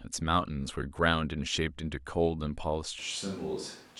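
The close microphone's signal most likely dropped out at about 2.99 s, leaving only a switch to a distant microphone for the rest of the clip. From that moment the speech turns hollow and roomy, with thinner low end, and the level falls by about 5 dB. Background noise also becomes noticeable, sitting only around 20 dB below the speech. The change is abrupt, with no fade.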